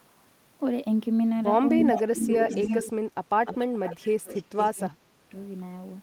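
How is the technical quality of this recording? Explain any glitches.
The speech has two recurring problems, both around the middle of the clip where both ends of the call seem to be talking at once.

Speech suppressed in double talk hits from 1.9 to 2.32 s, dipping about 20 dB, and again across 2.83 to 5.34 s, where roughly two seconds get pulled down by as much as about 30 dB. The likely cause is the echo canceller mistaking overlapping talk for echo and ducking everything.

There's also echo leak at 1.92–2.01, 2.17–2.83, 3.85–3.94 and 4.34–4.71 s: a delayed copy arriving around 350 ms late, about 5 to 15 dB under the speech. That's likely a speakerphone whose canceller let some of the loudspeaker signal slip back through.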